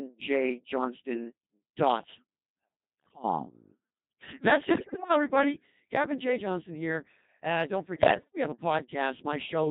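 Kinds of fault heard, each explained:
Codec 2 vocoder: speech is rebuilt from pitch, voicing and envelope as synthetic sine waves, so it stays buzzy and robotic throughout, fitting a 2.4 kbit/s mode.
Bit errors on digital voice radio: corrupted frames make the voice lurch in pitch and level into warbles and gibberish near 3.0, 4.8 and 8.0 s, not silent dropouts.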